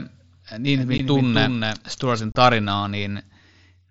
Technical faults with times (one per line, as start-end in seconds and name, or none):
0.74-2.22 doubled audio track
0.98 unconcealed Bluetooth headset packet loss
2.32-2.35 unconcealed Bluetooth headset packet loss